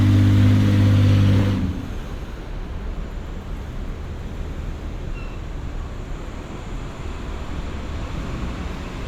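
Frames out of order occur at 1.36–1.43 s, 6.05–6.08 s and 8.00–8.03 s. Adjacent blocks were decoded in swapped order, roughly 30 ms at the first point and 10 ms at the others, giving a brief garbled flutter, without any lost time.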